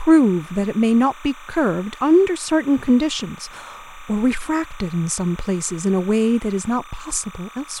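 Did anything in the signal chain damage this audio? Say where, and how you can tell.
Yes. Timecode bleed runs throughout the speech, entering at the analogue wiring stage. A steady chirping warble sits roughly 25 dB below the voice, flipping between tones near 1 kHz and 2 kHz at a rhythm that fits 29.97-frame linear timecode leaking from an adjacent track or cable.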